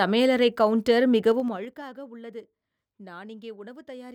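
From 1.28 to 1.82 s there's zipper noise: the speech level drops about 20 dB in unsmoothed 3 dB jumps, roughly ten a second, each ticking audibly.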